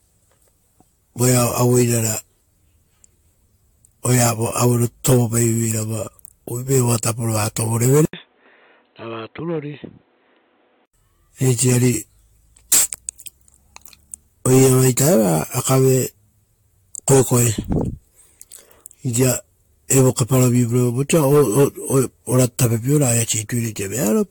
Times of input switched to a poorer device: 8.05-10.94

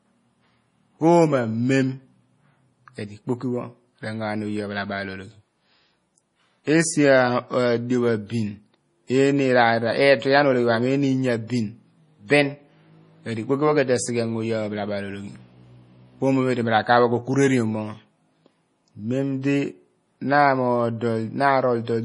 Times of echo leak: none

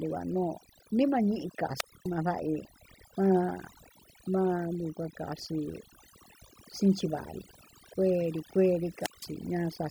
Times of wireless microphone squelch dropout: 1.73-2.10, 8.94-9.32

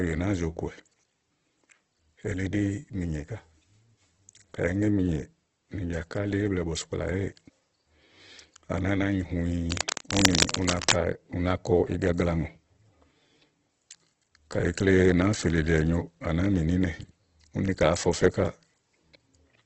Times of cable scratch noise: 9.71-10.93

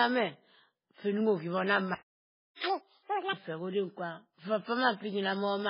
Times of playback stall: 1.95-2.64

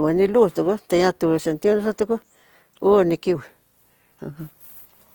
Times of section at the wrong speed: 3.35-5.14

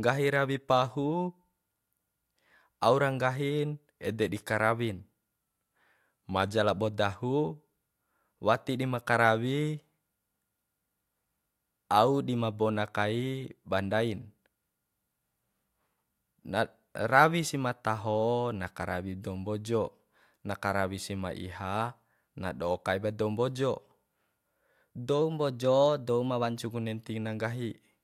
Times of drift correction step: 5.42-6.53, 25.22-26.63

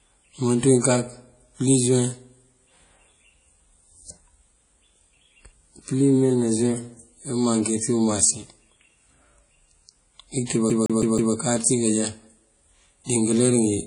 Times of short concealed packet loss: none

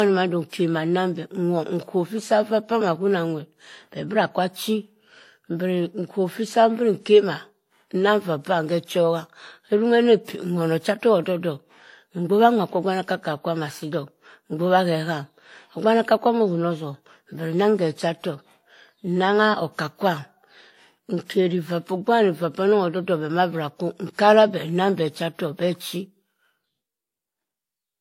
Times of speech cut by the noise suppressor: none

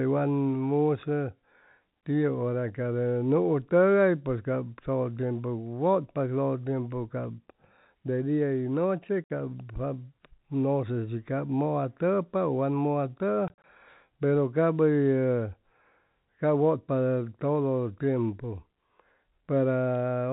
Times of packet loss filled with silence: 9.24-9.30, 13.48-13.64

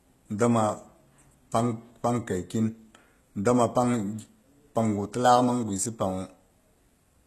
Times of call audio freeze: none

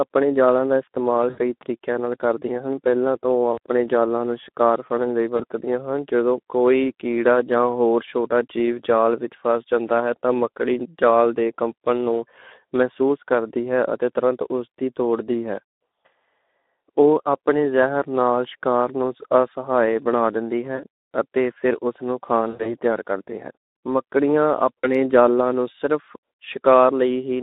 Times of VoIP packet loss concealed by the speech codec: 1.29-1.38, 3.53-3.58, 5.37-5.44, 15.89, 20.76-20.83, 22.49-22.72, 24.81-24.92

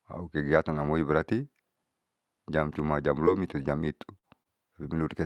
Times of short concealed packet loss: 3.25-3.29, 3.63-3.66, 4.18-4.47

